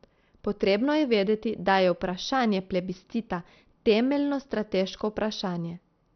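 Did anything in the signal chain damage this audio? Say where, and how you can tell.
Yes. Throughout, the speech sounds dull and gurgling, with a granular, watery distortion and nothing above about 6.2 kHz. The likely cause is the codec stage: MP2 compression at a low bitrate, around 48 kbps, switching off upper sub-bands and coarsely quantising the rest.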